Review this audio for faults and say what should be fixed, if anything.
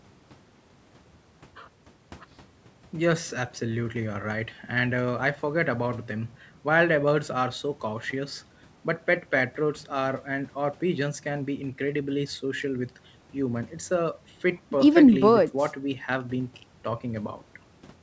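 Nothing here needs fixing: the speech has passed through a call's microphone processing and a WebRTC call path whose codec coding, consistent with G.722 at around 64 kbps, limits the content to nothing above 8 kHz, which is the expected behaviour of that path.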